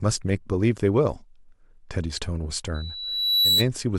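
At 2.74 s the microphone starts picking up the loudspeaker it feeds, and at one frequency the loop's gain climbs past unity. That frequency reinforces itself on each pass, producing loudspeaker feedback squeal: a single tone at 3.9 kHz that swells over roughly 0.7 s until it rises a few decibels above the speech. It rings as a piercing whistle until 3.68 s.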